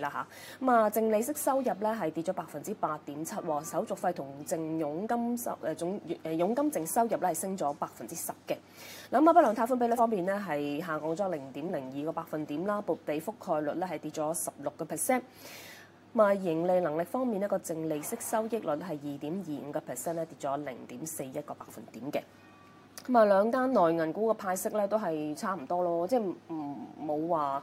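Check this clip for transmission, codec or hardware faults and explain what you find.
One fault stands out, near the end of the clip. From 25.58 s to 26.62 s the sound suddenly runs fast and sharp, speeding up by 5.3% and rising 89 cents, nearly a semitone, for about a second before snapping back to its normal rate and pitch. This is a drift correction step. The likely cause is clock-matching software that stepped the playback rate to drain or refill its buffer, shifting speed and pitch together.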